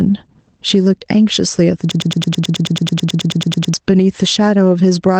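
Gain pumping runs through the whole clip. The level swings by roughly 15 dB. Loud and quiet passages sit close together, so the speech sounds flattened and squeezed. The likely cause is a microphone gain set far too high, with a fast limiter or compressor clamping down on every peak and then letting go.

From 1.91 s to 3.74 s there is a broken-record loop. A fragment of about 108 ms repeats exactly, back to back, around 17 times. The speech that belongs in those 1.8 seconds never arrives. The player, encoder or stream most likely stalled and kept resending the last piece it held, until it recovered and normal audio resumed.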